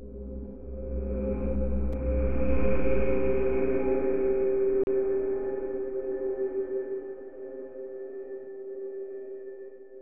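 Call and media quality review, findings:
Two brief dropouts to silence, sound resuming after each. At 1.93 s, a 6 ms gap. At 4.84 to 4.87 s, a 35 ms gap. Likely a Bluetooth stall: interference delays packets, the headphone buffer empties, playback pauses until resent packets arrive.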